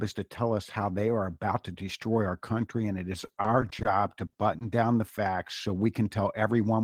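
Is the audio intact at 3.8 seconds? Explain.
No. At 3.8 seconds the audio sits inside a stretch of repeated packet loss, giving a robotic sound from 3.25 to 3.87 s, just after "country and it is". Data drops out seven times in quick succession. Each hole is patched by stretching the last sound forward, which covers 130 ms in total. Another 80 ms is simply missing, with no gap longer than 30 ms. About a fifth of the stretch is concealed. The result is choppy, robotic-sounding audio with small pieces absent.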